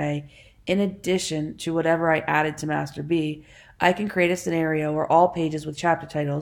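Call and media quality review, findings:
No call or media quality faults found in this review.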